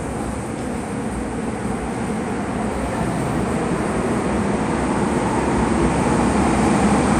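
A recording of sounds, carrying MP2 compression damage from start to finish. The top end is dull. Upper bands drop out and return, so the high detail flickers. What remains has a gurgling, granular roughness. This likely comes from MPEG Layer II coding, which splits the sound into 32 sub-bands and shares out bits among them. Starved bands are switched off, and kept ones are coarsely quantised. The damage is plainly audible, which fits a rate around 80 kbps.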